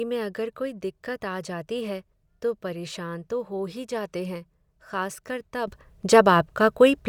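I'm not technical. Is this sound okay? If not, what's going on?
No. At 5.68 s, just after "हैं खासकर तब", the speech and the background hiss both become much louder in a single instant and stay that way until the end. This is a sudden gain jump: the volume setting inside the digital signal changed from one sample to the next instead of rising smoothly. The likely cause is a level adjustment applied without a gradual fade, so everything after that point is simply boosted together.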